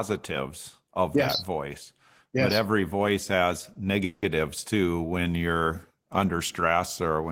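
Just after "but every voice has", at about 3.73 to 3.85 s, a short stall from a late packet stretches the last sound by about 20 ms into a slight buzz, with nothing lost. At 4.04 to 4.24 s, before "too when", a call audio freeze holds a fading buzz for 180 ms without dropping to silence, much longer than the brief stall, likely from packets delayed in transit.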